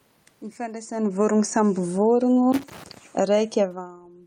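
From 0.9 s to 2.19 s the speech sinks steadily by about 8 dB, with the room noise behind it dropping by the same amount. This is automatic gain falling: the automatic gain control judged the input too hot or its background noise too strong and eased its gain down gradually.

Between 2.52 s and 2.98 s an irregular burst of scratchy crackle breaks up the speech. This is loose connector crackle, where a worn or dirty contact repeatedly makes and breaks as it shifts, chopping the signal in rapid, uneven bursts.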